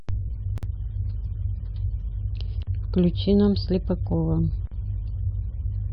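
Gaps at joins of encoded pieces occur at 0.58 s (50 ms), 2.63 s and 4.67 s (about 43 ms each), repeating every 2.0 s. Separately encoded pieces kept their start delay and end padding, so the speech briefly drops to silence with smeared edges, then resumes where it stopped.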